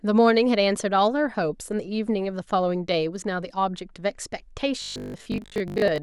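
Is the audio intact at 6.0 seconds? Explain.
No, from 4.82 to 6.02 s there's robotic sound from repeated short buffers: about half the audio is likely 20 ms chunks looping, forcing a rigid, metallic 50 Hz buzz.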